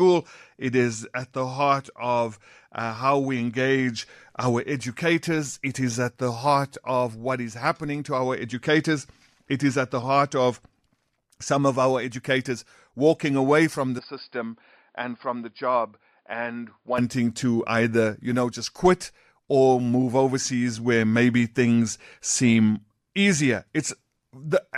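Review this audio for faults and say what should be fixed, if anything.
The recording input likely switched to a poorer device from 13.99 s to 16.98 s, starting right after "walking away from the" and lasting until "to either you know". The speech suddenly loses everything above 5 kHz and turns dull and boxy, drops by about 5 dB, and picks up a different noise floor around 45 dB below the speech. The change happens with no silence at the switch. Lock the input device for the whole session so the system cannot change microphones mid-recording.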